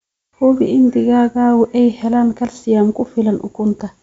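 No technical faults can be heard anywhere in the recording.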